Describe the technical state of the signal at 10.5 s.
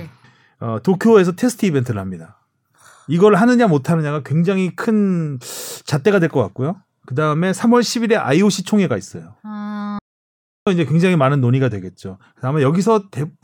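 At 10.5 s the signal is in an audio dropout to silence. It runs from 9.99 s to 10.67 s, about 0.68 s. The speech cuts off abruptly and the gap is silent. No room tone or background remains. Then the speech resumes mid-flow. The likely cause is a lost input, such as a disconnected device, a failed link or a brief mute, while recording continued writing silence. Whatever was said during the gap is gone.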